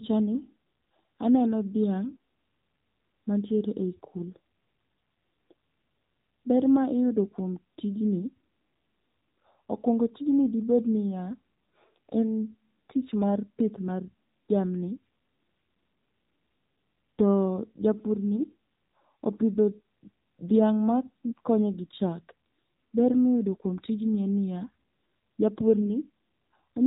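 The speech has been passed through an AMR narrowband mobile codec for its whole length, at a low rate that fits AMR-NB's 7.4 kbps mode. The signal was resampled to 8 kHz and rebuilt from a vocal-tract model fed by 2 to 10 pulses in each 5 ms, so nothing above 4 kHz survives. The voice sounds muffled, telephone-thin and plainly buzzy and synthetic.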